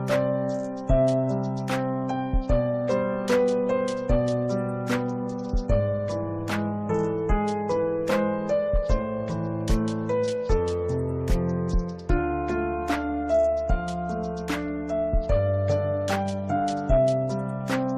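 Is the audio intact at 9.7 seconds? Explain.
Yes, the audio is intact at 9.7 seconds, with no dropout, click, distortion or other fault audible at that moment.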